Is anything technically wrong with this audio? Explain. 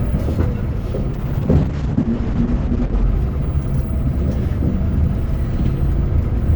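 Yes. From 1.14 to 3.11 s there is a call bitrate drop. The encoder was starved of bits, which fits a fall from 48 to 8 kbps for about 1.9 s. Coarser coding and a top cut near 8 kHz leave the sound muffled and rough until it recovers.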